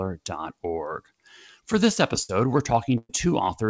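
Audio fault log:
2.23–2.30 s and 2.98–3.10 s: burst of packet loss. Consecutive packets arrived too late or not at all, so the receiver extended and faded the last sound. At 2.23 s it fills 58 ms, then skips 50 ms of audio. At 2.98 s it fills 113 ms, dropping into 30 ms of silence, and 120 ms is missing. Each sounds like a held buzz or fading hiss in band-limited sound with nothing above 8 kHz, then a jump ahead.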